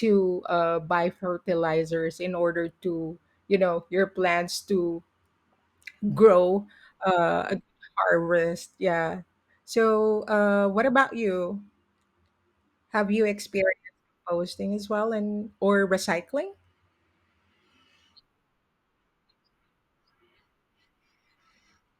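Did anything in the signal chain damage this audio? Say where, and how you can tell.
No, nothing in the signal chain damaged this audio.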